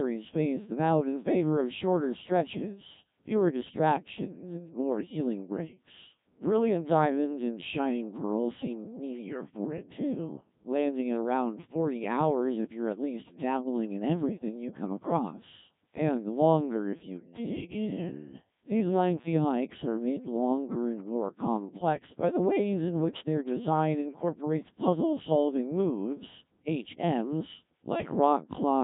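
Throughout, the speech has passed through the Codec 2 vocoder at 1.3 kbit/s: only pitch, voicing and spectral envelope survive, resynthesised as sinusoids, so it sounds heavily robotic and buzzy, with nothing above 3.8 kHz.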